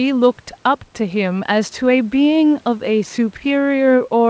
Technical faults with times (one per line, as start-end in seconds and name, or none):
none